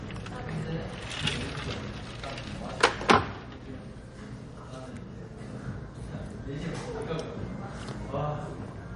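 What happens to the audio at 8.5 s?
At 8.5 s the sound carries the same damage heard throughout: nothing above 10.6 kHz and a watery, swirling texture, likely from heavy MP3 compression at a low bitrate near 40 kbps. Weak frequency lines drop in and out between frames, which a plain low-pass filter would not cause.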